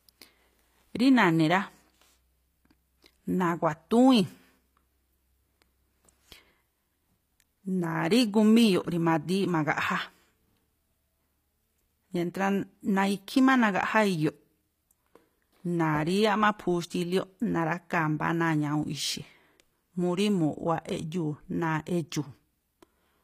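From start to finish, the speech carries plainly audible codec damage, likely from HE-AAC compression. The lower spectrum sounds coded directly. The treble sounds rebuilt, copied up from lower bands and shaped only roughly. Its harmonics do not line up with those below. S sounds turn gritty and metallic, with a lisp. Nothing sounds above 15.5 kHz. The damage points to a low bitrate, near 24 kbps.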